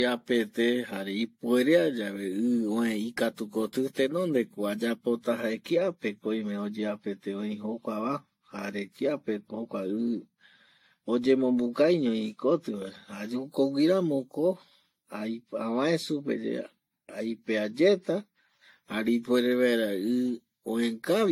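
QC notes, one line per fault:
Throughout, generation loss: The speech sounds swirly, smeared and hollow, more damaged than one lossy pass would leave it. Consonant attacks blur, and nothing sits above 16.6 kHz. The likely cause is repeated lossy coding, around five passes, in a way that fits an AAC-LC chain near 64 kbit/s. Each new pass quantises again on a shifted frame grid. So the noise and spectral holes from earlier passes build up.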